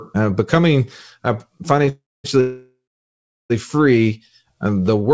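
Speech carried over a call path band-limited to 8 kHz shows two call audio freezes, likely from packets held up in transit until the jitter buffer ran empty. At 1.89–2.26 s and again at 2.40–3.52 s, the receiver extended the last sound as a fading buzz or hiss and then went quiet, for about 0.23 s and 0.73 s of silence respectively. The audio then resumed where it had stopped, so nothing is lost, but 0.35 s and 1.1 s of delay are added. From 4.54 to 5.12 s, a jitter buffer slow-down rebuilt the buffer's reserve by repeating single pitch periods or bits of pauses, adding 81 ms. The speech plays at 88% speed with unchanged pitch, sounding drawn out.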